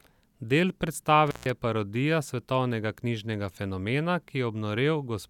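A speech recording with an intermittent contact fault: a loose cable or plug in the signal path briefly loses its connection between 1.27 and 1.50 s, just before "parodija svetovnega knjižnega fenomena". While the contact is open, for roughly 150 ms, the speech drops out and only a faint hiss remains. The connection breaking and then re-making puts crackle at both edges of the gap before the speech returns.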